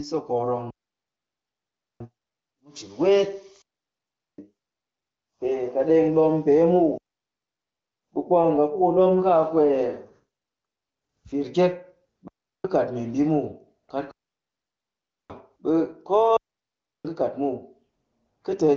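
Speech over an AMR-WB wideband path, audibly band-limited near 7 kHz, is cut by six digital wireless dropouts: 0.70–2.00 s, 3.62–4.38 s after "cin weet", 6.98–8.03 s, 12.28–12.64 s, 14.11–15.30 s and 16.37–17.05 s. Each is a clean, near-silent hole with no noise burst on either side, as the receiver mutes quickly when the link loses too much data.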